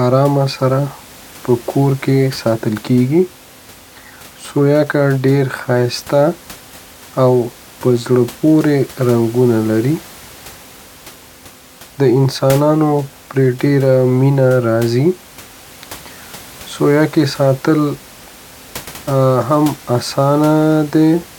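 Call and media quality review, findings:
Nothing to flag on this one, just some ordinary room noise sitting about 23 dB under the speech, which comes from the recording space rather than the system.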